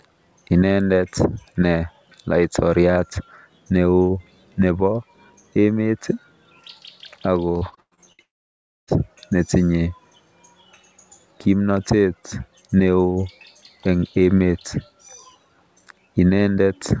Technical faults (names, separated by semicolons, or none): repeated packet loss (robotic sound); long network dropout